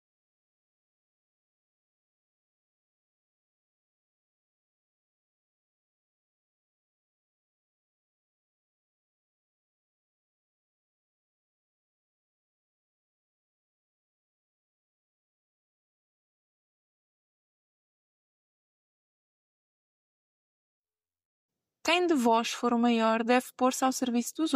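At 21.87 to 21.94 s a corrupt frame decoded fault appears as a brief squeaky noise burst. Damaged bits in a few compressed frames were decoded anyway, scattering energy at wrong frequencies, peaking near -15 dBFS. A spectrogram shows a short, blocky smear; the waveform shows a jagged blip.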